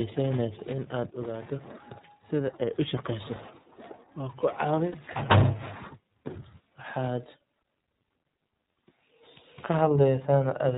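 From start to finish the speech carries iLBC codec damage: nothing above 4 kHz survives, and the voice sounds plainly rough and slightly synthetic. Unlike a plain low-pass or telephone filter, the grain comes from the excitation being re-coded every 30 ms at about 13.33 kbps.

From 4.92 to 4.95 s a single lost iLBC frame, about 30 ms, is filled with a repeated pitch cycle mixed with noise, heard as a brief buzzy held vowel. Unlike a dropout, there is no silence, and the voice is right again almost at once because each frame decodes independently.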